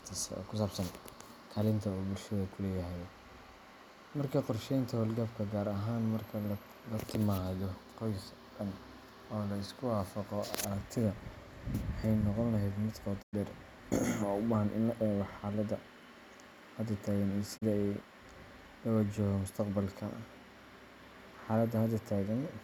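Digital broadcast dropouts at 13.21 to 13.35 s and 17.56 to 17.64 s (after "hadda taagan iyo"): the receiver lost valid frames and muted, fading out over 20 ms, leaving silent gaps of about 96 ms and 32 ms of missing speech.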